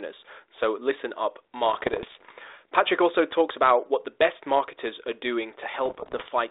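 Just after "listen up", from 1.66 to 2.32 s, and again from 5.85 to 6.29 s, bit errors on an ADPCM link break through the narrow telephone band, which fits 32 kbit/s G.726. Flipped bits derail the decoder's step size and predictor, so each error rings on briefly as pops, rough bursts and sudden level jumps. The second stretch is denser, at about one percent errors against somewhat less in the first.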